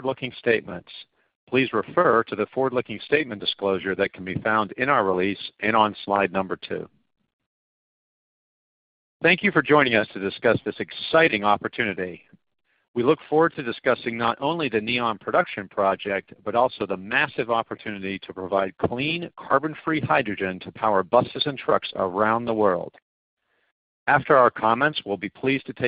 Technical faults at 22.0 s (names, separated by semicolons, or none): none